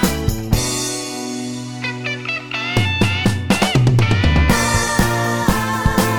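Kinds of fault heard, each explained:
No technical fault can be heard anywhere in the audio.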